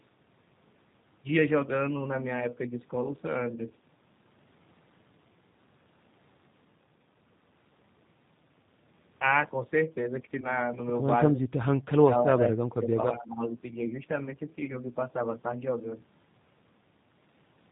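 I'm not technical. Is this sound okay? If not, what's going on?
No. The whole clip passes through the G.729 codec, a low-rate phone-call codec that cuts the high end and gives the speech a rough, slightly synthetic edge.

At 10.41 s and 14.64 s, VoIP packet loss concealed by the speech codec is audible. Brief chunks of sound went missing, and the decoder filled each gap with a fading stretch of the previous sound. The second dropout is longer and lasts until about 14.79 s.

Between 12.0 and 12.44 s, and again from 13.16 to 13.43 s, the speech dips. The likely cause is speech suppressed in double talk, where the echo canceller turned this talker down while the other side was also speaking.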